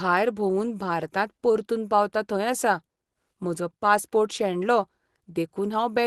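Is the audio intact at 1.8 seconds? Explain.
Yes, at 1.8 seconds the speech is intact, with no dropout, glitch or other fault at that moment.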